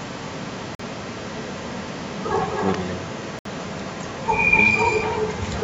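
Speech runs throughout with an echo leak. A delayed copy trails the voice by about 259 ms, roughly 5 dB quieter than the speech itself. A far-end echo canceller likely failed to remove loudspeaker sound picked up by its microphone. There are also two Bluetooth stalls. The sound drops to silence at 0.75 s for 45 ms and at 3.39 s for 64 ms, then resumes. Interference likely delayed packets until the headphones' buffer ran empty.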